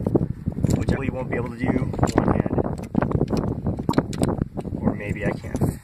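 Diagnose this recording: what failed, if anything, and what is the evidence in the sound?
Damaged data in a compressed stream, a codec-stage failure: two brief disruptions at 0.93–0.99 s and 3.88–3.93 s, each about 50 ms. Corrupt bytes made the decoder misread or discard frames and resynchronise at the next header. Unlike analogue crackle, each break is confined to a short span.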